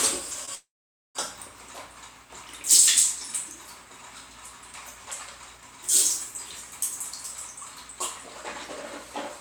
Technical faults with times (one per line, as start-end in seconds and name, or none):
0.45-0.49 short concealed packet loss
0.55-1.17 long network dropout